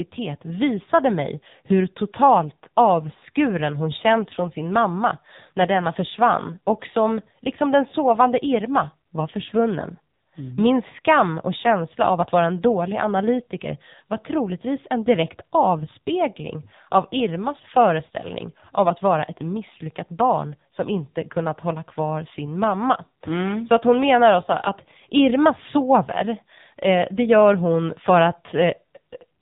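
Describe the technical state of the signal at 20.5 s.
At 20.5 s you're hearing the AMR narrowband mobile codec, and it's there for the whole clip, not just that moment. Nothing gets through above about 3.8 kHz, so the speech sounds boxed-in and phone-like. The coder rebuilds each 20 ms frame from a vocal-tract model fed by a handful of pulses, and the damage here is heavy, buzzy and synthetic, which fits a low mode around 6.7 kbps.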